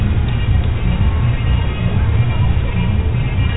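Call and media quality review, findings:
No audible defects found in this everyday-sound recording; no dropouts, distortion or level anomalies to report.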